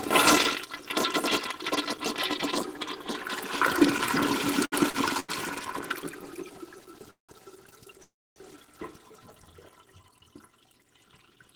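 Between 4.65 and 5.31 seconds this everyday-sound recording hits three short stalls from a late packet, at 4.65 to 4.74, 4.90 to 4.96 and 5.20 to 5.31 s. Each time the jitter buffer ran dry and the receiver held the last bit of sound for 66, 38 and 88 ms until the packet turned up. The result is a brief smeared hold with a faint buzz. No silence follows, and nothing is lost.

Two longer call audio freezes follow, at 7.11 to 7.31 s and 8.03 to 8.38 s. These are likely caused by packets held up in transit long enough to empty the buffer. Unlike the stalls, the stretched sound fades out here. It drops to silence for about 140 ms in the first freeze and about 270 ms in the second. When the packets arrive, the audio resumes where it stopped, so gaps of 181 and 334 ms are inserted rather than anything being cut.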